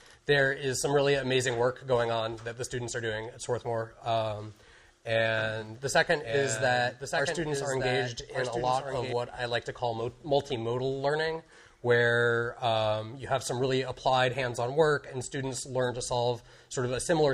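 From 5.6 s to 9.1 s, a doubled audio track appears. A second, full-band copy trails the original by about one second, a few decibels quieter. It carries no decay or room colour. It cuts in and out abruptly. The likely cause is a slower second capture path.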